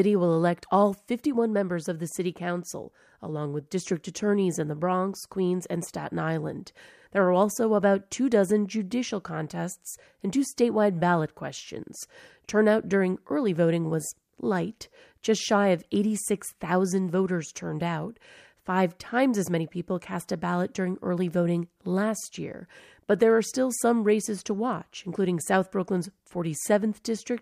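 No technical faults are audible anywhere in the speech recording.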